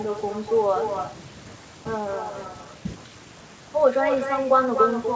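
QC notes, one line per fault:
Throughout, echo with no canceller. Every phrase returns roughly a third of a second later, only about 6 dB quieter. The far end's loudspeaker feeds its microphone, and nothing removes that copy. So a thinner double trails the speech, band-limited at 8 kHz like the call.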